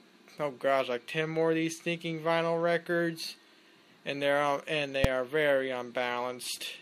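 At 5.04 s a single sharp bang cuts through the audio, over almost as soon as it starts. This is the invalid numbers at full scale fault: a calculation produced infinite or invalid values, and the output was pinned at one extreme value, far from zero and well beyond the audio's own peaks, for about 2.7 ms, which fits a 128-sample processing block. Because the block is so short, the jump to that extreme and back merges into one bang.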